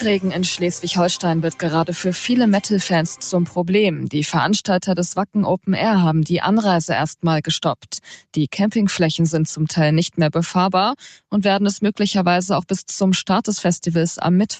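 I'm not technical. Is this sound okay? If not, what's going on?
No. The sound dips twice, from 3.46 to 3.62 s and from 8.03 to 8.37 s. This is sound cut by the noise suppressor. The call's noise filter mistook parts of the sound for background noise and turned them down. Steady or fading parts get quieter or end early.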